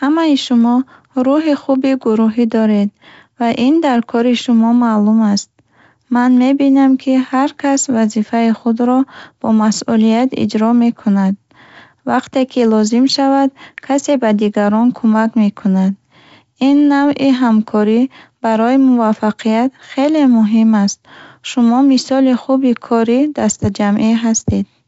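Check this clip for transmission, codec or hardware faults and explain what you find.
No faults found: the speech comes through G.722 wideband telephone coding at 64 kbit/s, with audio extending to about 7 kHz and at most a faint trace of the codec's upper-band hiss.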